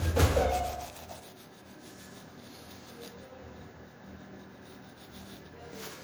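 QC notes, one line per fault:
Throughout, generation loss: swirly, hollow, smeared sound with blurred attacks, likely from around seven MP3 passes at about 96 kbit/s; spectrogram shows accumulating holes and smeared onsets.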